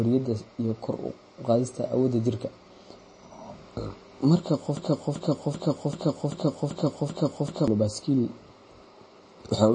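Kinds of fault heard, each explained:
MP3 compression: The speech sounds watery and swirly, with nothing above 9.4 kHz and plainly audible damage, likely from MP3 encoding at a low bitrate around 32 kbps.
Broken-record loop: From 4.77 to 7.68 s, a 0.39 s fragment repeats seven times back to back, replacing the real audio, likely because the stream stalled and kept resending its last piece.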